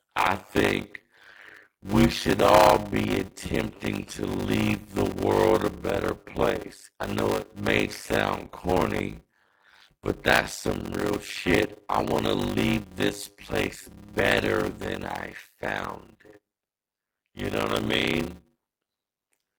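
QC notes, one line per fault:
throughout: block size mismatch (padded); zero-filled gaps cause 100 Hz buzz and 0.53x speed, fitting 256-sample writes, yet timbre stays, unlike rate error.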